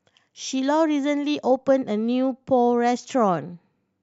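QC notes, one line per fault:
No faults heard in this clip.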